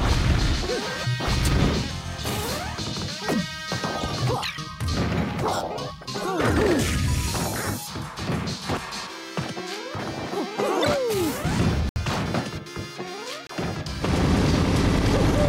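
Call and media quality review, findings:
Corrupt frame muted, twice: abrupt silent gaps at 11.89 to 11.98 s (about 86 ms, fits roughly three frames) and 13.47 to 13.51 s (about 42 ms, one frame's worth). Decoder likely rejected damaged compressed frames; player filled with silence, timing intact.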